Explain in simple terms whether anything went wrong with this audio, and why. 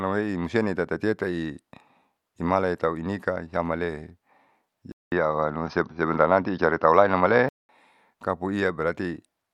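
At 4.92 seconds the speech drops out for about a fifth of a second, then returns duller and boxier, with a different loudness and background noise, until 7.69 seconds. This is likely an input switched to a poorer device. The new background noise sets it apart from simple muffling.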